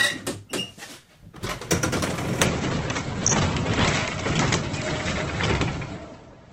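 Adaptive stream at a lower bitrate, from 2.45 s to the end: the player switched to a much lower-quality version of the stream, most likely because the connection slowed, and it never switched back. The change is abrupt and gapless. Everything above about 8.1 kHz vanishes, and the remaining sound picks up more codec artefacts. That points to a drop from roughly 64 kbit/s Opus to something near 12 kbit/s.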